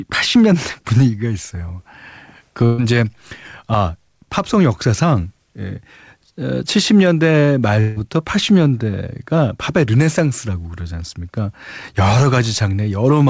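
At 2.66 s the speech breaks for about 0.14 s. This is a burst of packet loss. A short run of audio never reached the player in time, roughly 120 ms of it. The receiver filled the hole by stretching the last sound it had and letting it fade. You hear a brief held buzz or hiss that dies away. Then the speech picks up again slightly further along, with that slice gone.

From 7.80 s to 7.98 s there is a second, longer gap of about 0.18 s. Again the last sound is carried on as a fading buzz or hiss for around 160 ms, and the speech resumes past the missing part. There is no stretch of true silence. The cause is likely a long network dropout, with the line delivering nothing for that stretch. Both repairs sit over a band with nothing above 8 kHz, which fits the G.722 call codec at 64 kbps.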